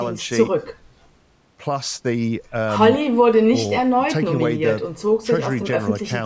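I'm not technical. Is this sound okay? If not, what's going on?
Yes, nothing is wrong here.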